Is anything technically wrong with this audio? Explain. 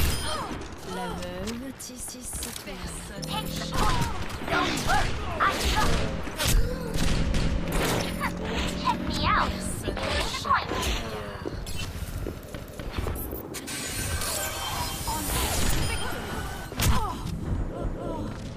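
Yes. Overlapping chunks occur at 2.09, 7.34, 12.59 and 17.84 s. Each time, the audio appears to be assembled from 5-second chunks that begin before the previous one finishes, so 250 ms plays twice at each join and is heard as a brief repeating stutter.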